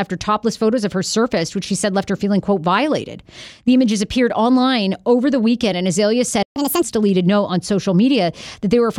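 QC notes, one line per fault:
6.43–6.56 s, playback stall: the speech cuts out abruptly for about 131 ms and then resumes mid-flow, likely because the player ran short of data or its output thread was blocked. On the waveform this is a flat near-silent gap; the spectrogram shows a clean vertical blank band across all frequencies.
6.56–6.82 s, catch-up at higher speed: right after the gap, the backlog plays at 1.5x speed by resampling, so the speech is hurried and raised about seven semitones before snapping back to normal. The spectrogram shows harmonics and formants shifted upward and compressed in time. The waveform looks denser over that stretch.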